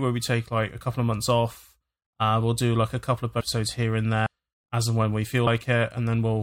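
Speech clip where compressed frames were skipped: whole frames never reached playback, so the sound jumps ahead, at 3.39–3.41 s by about 0.4 s, at 4.25 s by about 0.3 s, and at 5.46 s by about 70 ms, in steps fitting roughly 23 ms frames.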